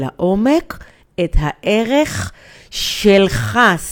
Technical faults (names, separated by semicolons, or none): none